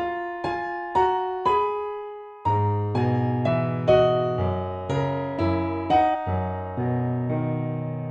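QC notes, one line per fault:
6.13–6.15 s, damaged data in a compressed stream: a brief glitch lasting about 22 ms. Part of the compressed data at this point is corrupt. The decoder misreads the frames there and loses sync. It then skips forward to find the next valid frame header. The garbled output gives the glitch.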